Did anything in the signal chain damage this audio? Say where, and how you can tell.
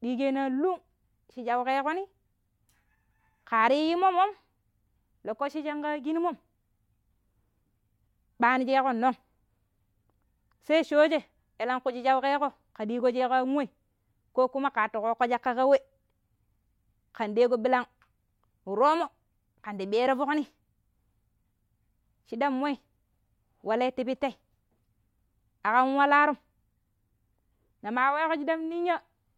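No, nothing in the signal chain damaged this audio.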